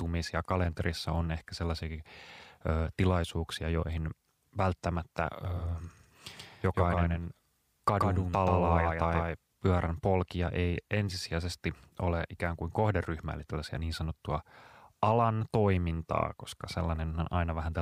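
A second, slower capture path, or likely an edit that left two copies of the track out of step, produces a doubled audio track in this speech recording between 5.45 s and 9.37 s. A full-band copy of the speech runs about 150 ms behind the original at roughly the same level, so every syllable is heard twice, like a dry slapback with no decay or room colour. The copy cuts in abruptly at 5.45 s and drops out just as suddenly at 9.37 s.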